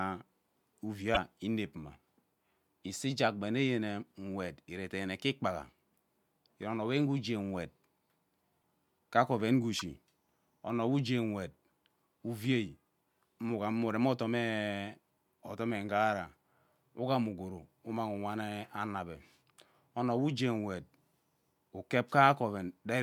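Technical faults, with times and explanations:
1.14 to 1.17 s, 8.61 s, 9.78 to 9.82 s: broken MP3 bit reservoir, likely; after a cut, frames decode from borrowed bytes, so the audio jumps ahead with a brief glitch and waveform jumps.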